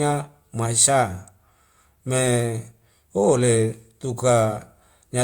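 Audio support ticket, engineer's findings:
Engineer's findings: no audio fault found in the speech clip for this support ticket.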